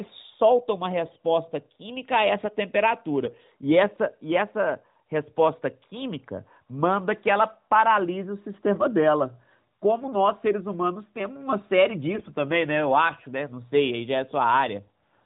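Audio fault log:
3.24–3.37 s and 12.14–12.31 s, AMR bit errors: the speech briefly turns hoarse and gargly. On a noisy link, a few percent of the weakly protected bits in the AMR-NB stream arrived corrupted, misplacing excitation pulses and skewing pitch and gain. The level and pitch of the voice hold steady. On a spectrogram the harmonics smear into scratchy noise below the 4 kHz ceiling, while the waveform envelope stays intact.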